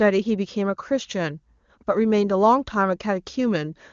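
No technical faults can be heard anywhere in this audio.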